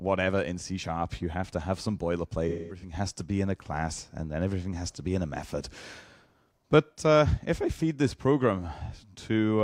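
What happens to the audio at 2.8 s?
At 2.8 s the audio is inside a stretch of AAC frame loss with concealment, running from about 2.48 s to 2.93 s. Around 256 ms of coded audio went missing in several gaps spread over about 341 ms, which fits roughly six lost AAC frames. The longest unbroken gap lasts about a fifth of a second. For each gap, the decoder rebuilt the sound from the last spectrum it received, either by scrambling the signs or by interpolating the energy, and it fades that estimate out when a loss continues.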